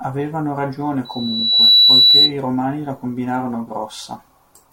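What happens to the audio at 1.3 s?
A piercing 4 kHz tone swells over under a second to about 15 dB above the speech: loudspeaker feedback squeal, from 1.05 to 2.32 s, as microphone-to-speaker loop gain exceeds one there.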